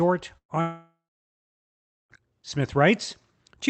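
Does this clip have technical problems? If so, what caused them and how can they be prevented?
Yes. From 0.37 to 0.52 s, a burst of packet loss leaves a fading held buzz or hiss where about 120 ms of speech went missing. The waveform shows a decaying smear, then flat silence. Prevent it with forward error correction and a slightly deeper jitter buffer.

From 0.61 to 2.13 s, a fading buzz or hiss gives way to roughly 1.1 s of silence, with about 1.5 s of speech lost. On a spectrogram this is a blank band, likely from a long network dropout. Prevent it with a more stable connection, such as wired rather than Wi-Fi, and congestion-aware routing.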